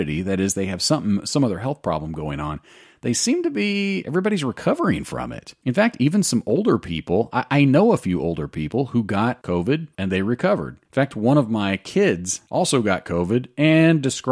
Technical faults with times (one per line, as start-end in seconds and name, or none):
none